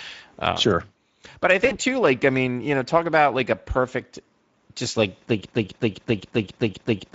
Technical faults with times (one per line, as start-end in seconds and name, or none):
0.00-7.14 Speex codec
1.65-1.73 VoIP packet loss concealed by the speech codec
5.45-7.14 broken-record loop